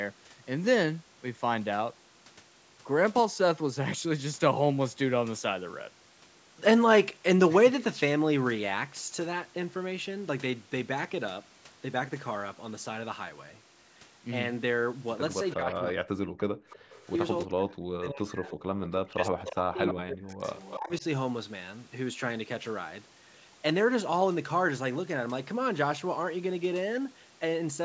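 From 15.5 to 15.93 s an echo leak appears: a faint, delayed copy of the speech, trailing it by 321 ms at about 15 dB below the talker. This is likely a loudspeaker on the far end whose echo canceller let residual pickup through. On a spectrogram it shows as a weaker duplicate of the harmonic pattern, shifted right by about a third of a second.

Overlapping it, from 15.54 to 16.41 s, the speech is suppressed in double talk. The talker's level sinks by roughly 40 dB at its deepest, across roughly 0.7 s. This is likely because the canceller could not tell near speech from echo while both sides spoke, so it attenuated both. The waveform envelope collapses in patches, and the spectrogram shows gaps and a darkened top band.

From 16.69 to 16.92 s the background is gated by the echo canceller. The room tone drops by about 28 dB for roughly 150 ms, then returns. It looks like a brief hole in the noise floor across all frequencies.

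Echo leaks again at 16.7–17.01 s (302 ms delay, about 25 dB down) and at 18.48–18.88 s (302 ms, about 20 dB down). Double-talk suppression returns at 17.45–18.48 s, affecting roughly 1 s, and at 19.01–21.04 s, affecting roughly 1.5 s. Both reach around 40 dB deep. Inside that last stretch, from 19.45 to 20.77 s, the echo is loudest, only about 10 dB under the speech at a 302 ms delay. It is clearly visible as a ghosted, time-shifted copy, all below the 8 kHz ceiling set by the call's microphone processing.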